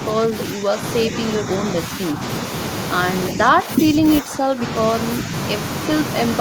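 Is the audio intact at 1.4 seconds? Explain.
No. Speech suppressed in double talk occurs from 1.4 to 1.49 s: the speech dips by a few decibels for about a tenth of a second. The likely cause is an echo canceller mistaking overlapping talk for echo and attenuating it.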